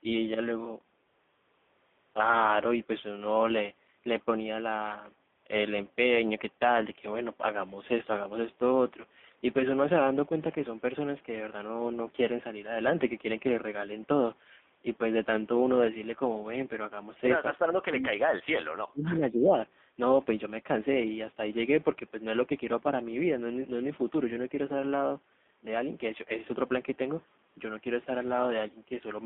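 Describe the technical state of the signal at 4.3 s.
AMR narrowband mobile codec damage is present at 4.3 s, as it is across the whole recording. The speech has passed through a narrowband mobile speech coder that rebuilds each 20 ms frame from a vocal-tract filter excited by a handful of pulses. The passband runs only from about 200 Hz to 3.6 kHz, so the speech sounds boxy and telephone-like. The plainly audible buzzy, synthetic edge fits one of the codec's lower modes, around 7.4 kbps.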